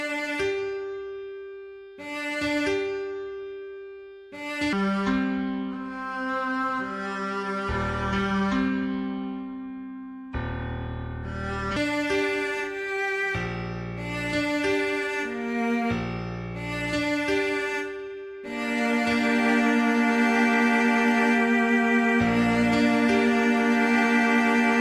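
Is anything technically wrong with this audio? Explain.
Yes. From 4.73 to 11.77 s there's a wrong sample rate fault: the samples get played back slower than they were captured, with no conversion, so everything runs at two-thirds speed and drops about 7 semitones, which fits 48 kHz material played out at 32 kHz.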